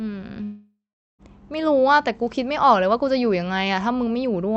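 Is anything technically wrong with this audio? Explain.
Yes. From 0.43 to 1.22 s there is a long network dropout. The sound smears into a fading buzz, then 0.41 s of silence. About 0.76 s of speech is simply gone. The likely cause is lost packets that the receiver tried to conceal.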